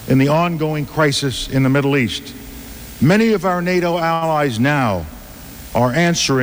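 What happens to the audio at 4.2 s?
At 4.13 to 4.23 s there is a short stall from a late packet. A packet arrived late and the jitter buffer ran dry. The last sound is stretched for about 79 ms, then playback resumes where it stopped. Nothing is lost, but the sound hangs with a faint buzz or dip.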